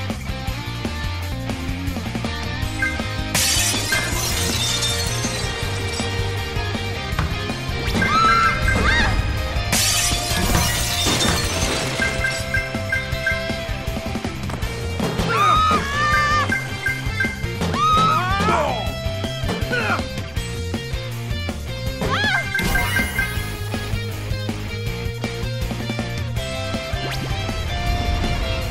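At 1.32 s the audio jumps ahead by about a second. At 17.45 s it jumps again, by about 300 ms. These are compressed frames skipped, with whole frames missing or rejected. The gaps fit multiples of an 85 ms frame.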